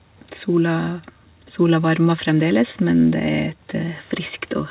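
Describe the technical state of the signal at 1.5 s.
At 1.5 s the speech is intact, with no dropout, glitch or distortion; its narrow, telephone-like band, with nothing above about 4 kHz, fits the normal behaviour of a narrowband call codec.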